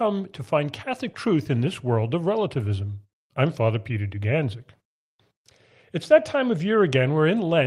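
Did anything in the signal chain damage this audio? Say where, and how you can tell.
No, nothing in the signal chain damaged this audio.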